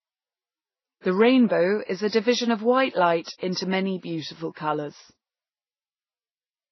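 Speech with transcoding between lossy codecs throughout: the sound carries layered smearing and watery swirl, consistent with an MP3 around 24 kbit/s likely re-encoded to Vorbis at a similar low rate. A spectrogram shows nothing above 6 kHz and blotchy, stacked quantisation patches.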